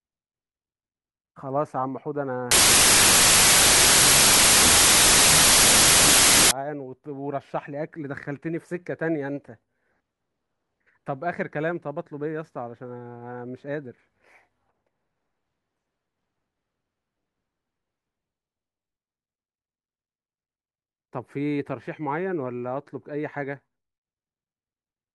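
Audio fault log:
2.51–6.51 s, wrong sample width: A loud hiss swamps the speech, which is still faintly audible beneath it, slowed to half speed and an octave lower. The pattern fits 32-bit samples being read as 16-bit ones. Each real sample is split into two values. One half carries the upper bits and traces the speech. The other holds the lower bits, which behave like noise. Twice as many values play at the same rate, which halves speed and pitch.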